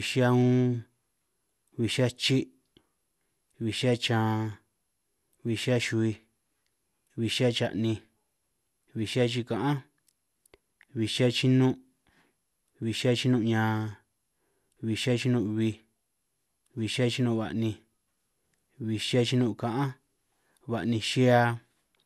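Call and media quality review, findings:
Generation loss, whole clip: swirly, hollow speech with smeared consonant attacks and nothing above 12.6 kHz. Likely repeated re-encoding, around seven passes, consistent with an MP2 chain at 128 kbit/s. Single encodes at that rate sound cleaner, so the accumulated smearing points to tandem coding.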